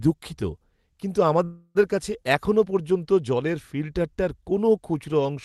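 From 1.43 to 1.77 s comes a call audio freeze. A fading buzz fills the gap, likely from an emptied jitter buffer. Speech resumes later, nothing lost.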